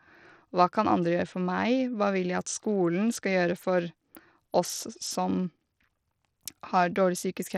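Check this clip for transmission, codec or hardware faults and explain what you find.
One codec fault runs through the whole clip: the speech carries plainly audible damage whose character points to Bluetooth SBC compression, likely at a low setting consistent with roughly 80 kbps. SBC splits the signal into a few wide sub-bands and hands out bits without a hearing model, so the upper bands get starved and everything is coarsely quantised. The treble flickers in and out while a gritty noise and aliasing cling to the speech. On a spectrogram the top bands look patchy and blocky, switching on and off.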